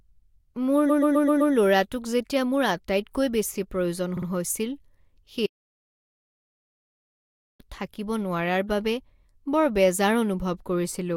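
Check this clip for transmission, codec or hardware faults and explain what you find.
Two kinds of fault turn up: repeated frames in two places and one dropout to silence.

Repeated frames, 0.89–1.53 s: the speech stutters, looping a 128 ms slice five extra times, before "ল'ৰাটোক যেতিয়া মোৰ আটাইতকৈ". The same stretch of compressed frames was written again, adding 640 ms. At 4.16–4.26 s, right after "মোৰ আটাইতকৈ বেছি প্ৰয়োজন", a 44 ms block plays twice more, adding about 107 ms.

Audio dropout to silence, 5.46–7.60 s: the speech cuts off mid-flow into dead digital silence with no room tone, returning at "থাকিব নোৱাৰাৰ বাবে". The input was likely lost while silence kept being written, and about 1.36 s of speech is gone.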